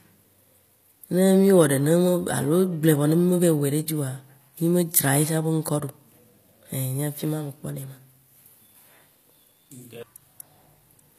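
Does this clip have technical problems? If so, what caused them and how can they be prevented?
Yes. Throughout the speech, the spectrogram shows a flat ceiling with nothing above 15 kHz. This is likely low-bitrate audio saved at a high bitrate: the MP3 keeps the losses of an earlier low-rate encode. To prevent it, encode once from the original uncompressed source.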